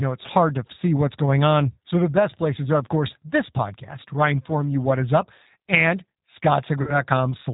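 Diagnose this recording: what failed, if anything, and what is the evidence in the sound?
Throughout, the speech sounds rough and slightly synthetic, with nothing above 4 kHz and a clearly audible codec texture. This is the G.729 codec at 8 kbit/s, which rebuilds the voice from a vocal tract filter, a pitch predictor and sparse pulses.

From 6.82 to 6.97 s the sound smears into a fading extrapolated tail, and the voice stays weak or distorted after it returns. This is VoIP packet loss concealed by the speech codec at the network stage. About 50 ms went missing, which fits five 10 ms frames, and the decoder extrapolated from its last pitch and filter.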